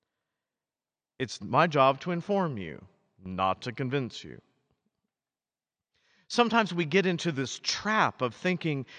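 Nothing here to flag: the speech runs along without a single technical hiccup anywhere in the recording.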